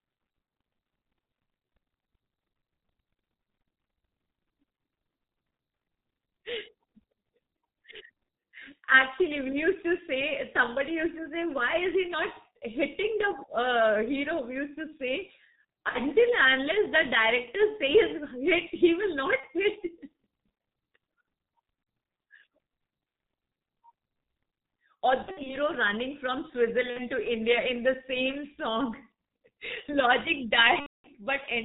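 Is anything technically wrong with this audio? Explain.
Yes. The speech runs through a heavily degraded G.723.1 codec for the whole clip. At about 6.3 kbit/s this low-rate telephony coder keeps nothing above 4 kHz and slowly tracks a simplified voice model, so the speech sounds muffled and hoarse with smeared consonants. A spectrogram would show a hard ceiling at 4 kHz and blurred, coarse formant detail.

VoIP packet loss concealed by the speech codec occurs at 15.89–16.01, 19.40–19.46, 21.83–21.86, 25.22–25.56, 26.90–27.08 and 30.80–31.11 s. Each lost stretch, from 30 ms up to 240 ms at the end, is filled by the decoder repeating its last pitch and filter at falling gain, and muted from the third lost frame in a row. The result is a fading smear that stays weak for a moment afterward. The 25.2 s event is scattered across about 240 ms. On a spectrogram these gaps appear as frozen, repeated harmonics, and on the waveform as decaying, overly regular cycles.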